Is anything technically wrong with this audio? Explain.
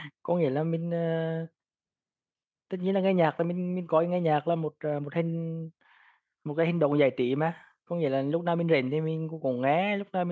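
No, nothing stood out on listening; the speech has simply passed through a call's microphone processing, which leaves nothing above 8 kHz and trims the lowest bass as that path normally does.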